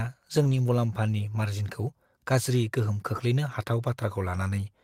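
From 0.43 to 0.57 s, just before "मुलाम्फानि मार्जिनखौ गाज्रि गोहोम", there is a lost packet rebuilt from error correction. About 80 ms of audio, consistent with four separate packets, was dropped and replaced by low-bitrate copies carried in the following packets, so there is no gap. That stretch sounds rougher and noisier. At 3.15 to 3.21 s, right after the same phrase, a shorter 40 ms patch, fitting two packets, shows the same coarse texture.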